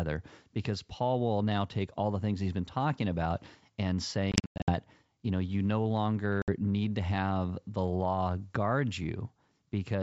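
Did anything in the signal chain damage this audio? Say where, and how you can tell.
Yes. Packets went missing on the network leg of a G.722 wideband call at 64 kbit/s. From 4.32 to 4.72 s, after "been talking about and" and before "you know you no", about 260 ms of speech is lost, scattered over 360 ms with the longest run lasting 100 ms. That fits roughly fifteen dropped packets. A second hole of 60 ms at 6.42 to 6.52 s, just before "need to have the", fits about three packets. Each gap is hard-edged silence. Because ADPCM decoding depends on the predictor and step size built up from earlier samples, the decoder loses sync with the sender. The speech comes back slightly distorted, then settles over some tens of milliseconds.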